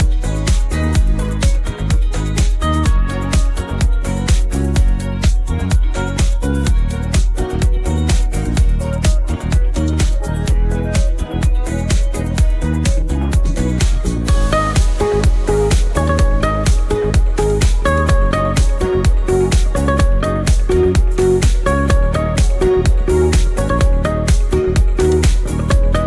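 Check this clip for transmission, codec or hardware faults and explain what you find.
Nothing in the clip points to a transmission, codec or hardware fault.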